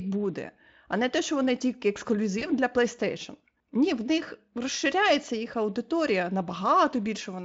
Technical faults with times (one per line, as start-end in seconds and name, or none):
2.39-2.46 VoIP packet loss concealed by the speech codec